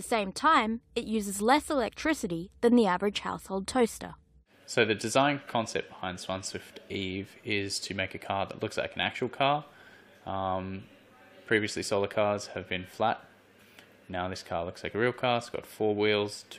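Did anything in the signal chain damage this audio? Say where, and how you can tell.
No, nothing in the signal chain damaged this audio.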